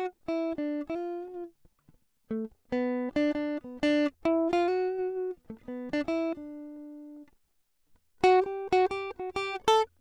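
Nothing in this bit of music stands out as a technical fault, so there's nothing to flag.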